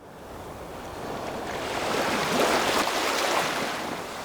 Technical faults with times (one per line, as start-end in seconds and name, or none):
2.82-4.25 sudden gain jump